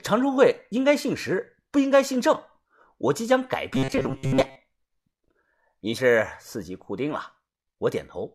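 A speech recording with two separate faults. From 3.73 to 4.56 s the voice turns into a rigid, metallic drone at about 134 Hz, robotic sound from repeated short buffers. The likely cause is audio arriving too slowly, so the player loops a slice of roughly 7.5 ms over and over for most of that stretch while the real signal is skipped. On a spectrogram this shows as evenly spaced horizontal harmonics of 134 Hz replacing the natural speech pattern, and the waveform repeats a short identical cycle. Then, from 5.97 to 5.99 s, damaged data in a compressed stream causes a brief glitch: the decoder misreads the corrupted frames, loses sync and picks up again at the next valid frame header. On a spectrogram this appears as a thin vertical smear of broadband or oddly patterned energy with a slight discontinuity on either side, and the waveform shows a short burst of malformed signal with an abrupt step where playback resumes.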